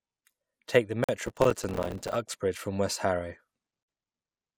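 At 1.04 s the speech drops into a silence of about 46 ms with softened edges, then picks up exactly where it stopped. This is a gap at a join of encoded pieces: separately encoded segments were spliced without trimming the start delay and end padding. From 1.26 to 2.16 s a gritty crackle tears through the speech. It is a dense run of about 100 tiny silent dropouts of roughly 3 ms each, which fits a very short audio buffer. This is processor overload crackle: the processor repeatedly missed its deadlines. At 3.83 s the same join gap returns, a silence of about 49 ms.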